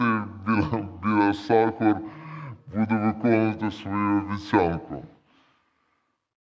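The whole clip plays at two-thirds speed and seven semitones low, a wrong sample rate. The slow, deep speech fits 24 kHz audio played at 16 kHz.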